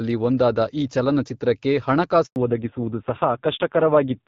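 Up to 2.26 s the call sits on HD Voice, with that light AMR-WB coding that sounds like the wideband path at around 12.65 kbit/s. Then there's a handover gap from 2.26 to 2.36 s: the call jumps networks, no speech frames get through for those 100 ms, and the sound drops out almost immediately to dead silence. Whatever was said in that slice is simply gone.

Right after, at 2.36 s, you get a fallback to narrowband that lasts to the end. Nothing above 4 kHz survives, so the sound turns muffled and dull, with a grainy roughness that fits AMR-NB running at a low rate, something like 5.9 kbit/s. The air and crispness vanish compared with the first half.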